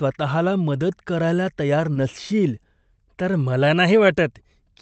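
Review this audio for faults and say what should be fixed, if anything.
At 1.93 to 1.97 s, just after "करायला तयार", there is a short concealed packet loss. About 20 ms of audio arrived too late, so the decoder extended the preceding sound and then blended back. The result is a brief smear with no silent gap, which is how it differs from a plain dropout. Enabling forward error correction or giving the jitter buffer a little more depth would prevent it.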